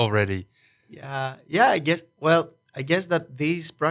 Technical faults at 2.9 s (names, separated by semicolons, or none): none